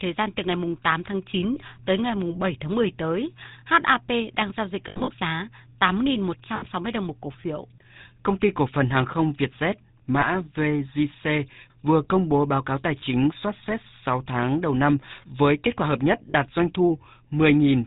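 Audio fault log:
throughout: GSM full-rate codec. The speech has been squeezed through the original GSM mobile coder at about 13 kbps, which models the vocal tract and excites it with a sparse, regularly spaced pulse train rather than the real waveform, and discards everything above 4 kHz. That coarse excitation gives the voice a plainly audible buzzy, gravelly roughness, and the missing top octave leaves it dull and boxy, with sibilants blunted.
1.54 to 1.57 s, 4.88 to 5.10 s, 6.56 to 6.65 s, 10.2 to 10.27 s, 13.0 to 13.03 s, 16.3 to 16.35 s: lost GSM frames. At each point the decoder received damaged frames and filled the gap by repeating the last good frame's parameters. Single 20 ms losses at 1.54 s (just before "tới ngày"), 10.2 s and 13.0 s are brief rough blips. About 40 ms goes just after "kết quả hợp nhất" at 16.3 s, and 60 ms just before "đồng một cổ phiếu" at 6.56 s. Both produce a short metallic ring. 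The worst stretch is 4.88 to 5.10 s, where about 140 ms is lost in bursts over 200 ms, the longest roughly 70 ms. This gives a stuttering, ringing smear.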